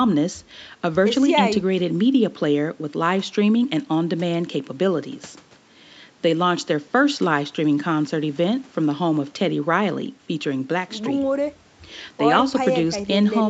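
Nothing's wrong with this speech clip; it just carries the usual traits of a call, with the top end stopping around 8 kHz and the coding texture you'd expect from a call codec.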